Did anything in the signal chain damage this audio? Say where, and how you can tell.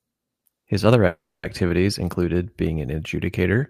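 Yes: a call audio freeze at the network stage, 1.07–1.45 s, likely a jitter-buffer underrun. The spectrogram shows a fading smear, then 240 ms of flat silence, before "included being an" resumes intact.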